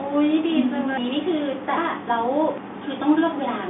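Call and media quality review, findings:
Audio missing between chunks: abrupt skips at 0.98, 1.78 and 2.58 s, about a fifth of a second of sound gone at each, sides butted together with no silence. Likely cause: chunked capture or processing dropping audio at each 1 s chunk boundary. Differs from packet loss: strictly periodic, no silent gap or concealment smear, just a hard splice. Heard through G.711 telephone coding, band roughly 200 Hz to 3.6 kHz, nothing above 3.8 kHz.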